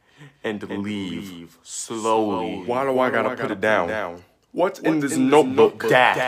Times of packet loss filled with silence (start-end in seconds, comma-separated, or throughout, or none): none